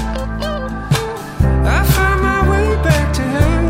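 No dropouts, distortion, level jumps or timing errors turn up anywhere in the audio.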